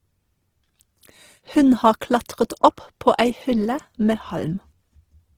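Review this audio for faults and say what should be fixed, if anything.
Throughout the speech the high end sounds grainy and rough, with tones turning noisy. This is likely Opus compression at a low bitrate, around 16 kbps, filling starved bands with folded or noise energy. On a spectrogram the upper bands look smeared and speckled rather than cleanly harmonic. Re-encode from the original source at a higher Opus bitrate, or keep a lossless copy.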